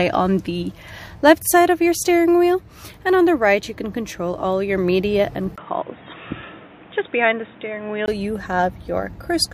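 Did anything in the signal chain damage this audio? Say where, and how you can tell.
Yes. At the driver stage, the input was likely switched to a poorer device. From 5.56 s, after a 20 ms gap, the sound turns dull and boxy, with nothing above 3.8 kHz and new noise roughly 30 dB down, at an unchanged level, until 8.08 s.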